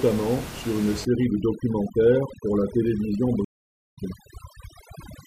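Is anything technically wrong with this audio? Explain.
Yes, there are two faults in this speech clip.

Overdone noise removal runs from 1.05 s to the end. The noise reduction is set too strong for room noise sitting only about 13 dB below the speech, so it switches off any frequency band near its noise estimate, taking the quieter parts of the voice with it. The background drops and breaks up into twinkling artefacts.

A stream reconnect occurs from 3.45 s to 3.99 s. The connection dropped and the player went silent for about 0.52 s, then reconnected and started a fresh decoder mid-stream. When sound returns, it picks up roughly half a second later than where it stopped, so a short stretch of the speech is skipped, and the first moment after the gap fades in.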